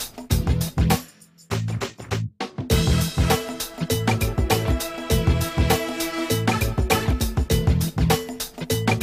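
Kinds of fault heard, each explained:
Nothing here stands out as a fault; the audio runs along without any glitch or problem worth pointing to.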